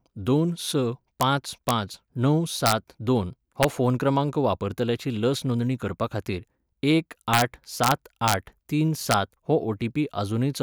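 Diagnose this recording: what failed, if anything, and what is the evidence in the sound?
Integer overflow in a fixed-point gain or sample-format stage. Violent cracks hit loud speech peaks at 1.21, 1.69, 2.66–2.72, 3.63, 7.34–7.42, 7.84–7.92, 8.28–8.34 and 9.11–9.14 s. Peaks only about 0 to 3 dB over full scale wrapped to the opposite sign instead of clipping.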